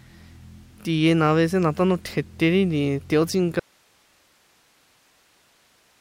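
After "nti teotsinka" at 3.60 s, an audio dropout to a faint residue cuts to hiss roughly 40 dB down, likely from a lost input. The waveform abruptly flattens and the spectrogram shows faint noise to the end.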